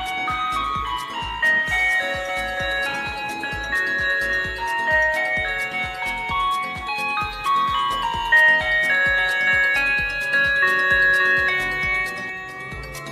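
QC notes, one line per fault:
No faults were heard anywhere in the clip. Nothing in it calls for a QC entry.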